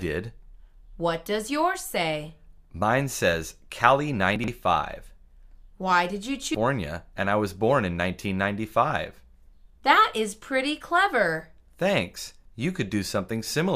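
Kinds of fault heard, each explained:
Chunks out of order: Between 4.36 and 4.48 s the sound turns briefly jumbled. The audio is handled in 40 ms chunks, and one of them was delivered two chunks late, so it plays after the two chunks that should have followed it. Nothing is dropped, but the sequence is scrambled, and this creates three abrupt joins.
Stream segment skipped: At about 6.54 s the sound jumps forward abruptly, with a small blip at the join, as though a stretch of the programme has gone missing. The likely cause is a segment of the segmented stream that failed to load. The player moved straight on to the next segment, leaving a hard discontinuity where the missing segment's audio would have been.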